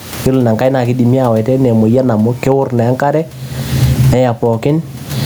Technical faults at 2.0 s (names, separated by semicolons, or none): gain pumping